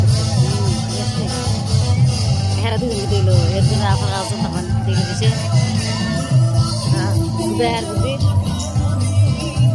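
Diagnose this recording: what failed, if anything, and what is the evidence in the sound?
Nothing here points to a failure at any stage; the audio holds together from the first moment to the last, with no dropouts, clicks or level oddities to suggest a problem anywhere in the chain.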